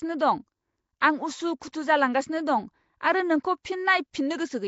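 From the start to the end, the speech carries a rough, hissy halo and a smeared, underwater character, with nothing above 7.7 kHz. The likely cause is Nellymoser compression, whose damage is plainly audible here, at a level that fits a rate of about 32 kbps. The codec spends a fixed, small number of bits on each short block and fills bands it cannot afford with noise. That texture is spread evenly through the clip. A simple low-pass filter would dull the sound without this grainy fizz.

Pre-echo appears at 1.00, 1.60, 1.72 and 3.63 s. Each time, a short hiss of about 13 to 19 ms comes just before a sharp onset, and the attack sounds softened. The coder spreads its quantisation noise across a whole block, so noise sized for the loud attack also fills the quiet moment before it. Unlike a click or a dropout, the blemish always comes just ahead of a transient, and the attack itself still arrives.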